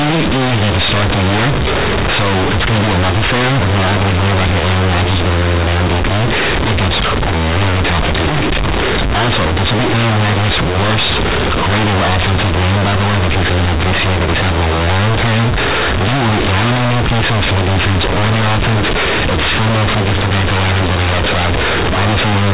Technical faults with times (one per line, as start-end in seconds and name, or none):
0.00-22.54 companded audio read as linear